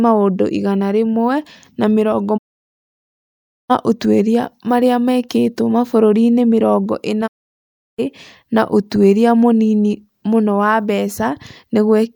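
The receiver stopped getting usable digital frames twice, a digital broadcast dropout, and muted each time until good frames returned. From 2.36 to 3.72 s, after "igana rĩmwe na mĩrongo", the speech fades out over 20 ms into about 1.3 s of silence and resumes at "ũtuĩria marĩa mekĩtwo". From 7.26 to 8.00 s, after "mĩrongo ĩna", a 0.7 s hole follows before "na ũtuĩria mũnini mũno". The speech in both gaps is lost.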